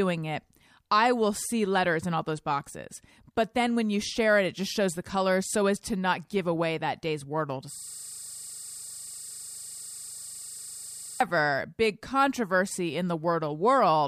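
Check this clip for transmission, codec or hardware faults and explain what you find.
One fault: a system hang loop from 7.74 to 11.20 s, ending just before "big controversy in". The host or driver stalled while the hardware kept replaying its ring buffer, repeating one 40 ms slice about 87 times as a steady 25 Hz buzz.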